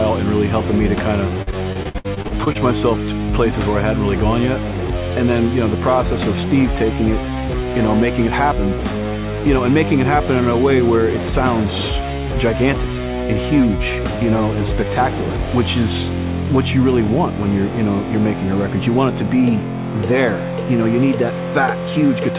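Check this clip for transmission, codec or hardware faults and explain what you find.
One transmission fault stands out, in a call path whose 4 kHz band limit fits G.711 mu-law. Repeated packet loss (robotic sound) runs from 1.42 to 2.57 s: about a dozen holes, up to 61 ms each, are patched by extending the previous sound, leaving choppy audio.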